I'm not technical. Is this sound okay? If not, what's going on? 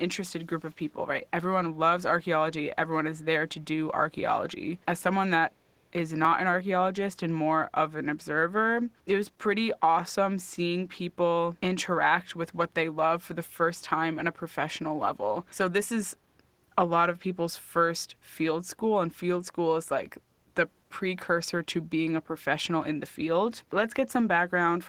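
No. There are two small problems. At 0.68 to 0.73 s a very faint, delayed copy of the speech slips in, trailing the original by about a third of a second (327 ms). This is an echo leak. The likely cause is that the other side of the call was on a loudspeaker, and its echo canceller didn't fully clean up what its microphone picked up, so a scrap of that sound was sent back.

At 6.25 s there is a brief skip where a tiny piece of the speech, around 20 ms, simply vanishes. The sound on either side is butted together with no gap, so it comes across as a small jump rather than a pause. This is audio missing between chunks. The likely cause is that the recording is handled in pieces of about 10 s, and a sliver was lost at the handover from one piece to the next.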